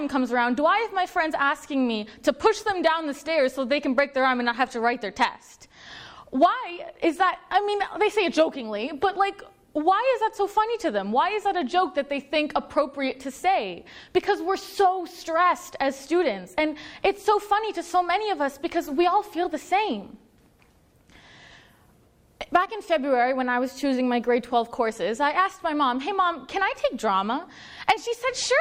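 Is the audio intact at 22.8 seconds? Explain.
Yes, the audio is intact at 22.8 seconds, with no fault present at that moment.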